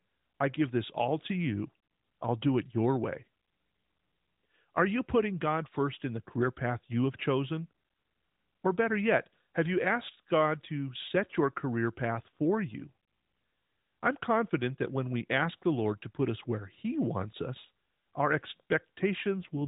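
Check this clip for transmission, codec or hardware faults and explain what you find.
One transmission fault appears near the very end of the speech, heard through a narrowband mobile codec. From 19.31 to 19.68 s there is an AMR rate drop. The link forced fewer bits, which fits a fall from 12.2 to 5.9 kbps. The voice turns rougher and buzzier, without a gap.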